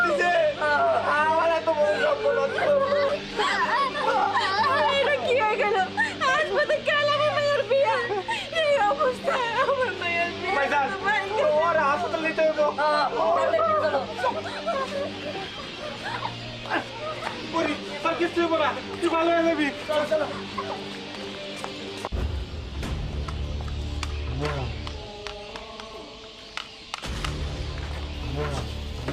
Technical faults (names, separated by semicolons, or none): adaptive stream at a lower bitrate